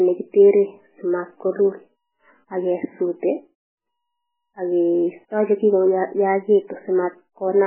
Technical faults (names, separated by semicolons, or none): MP3 compression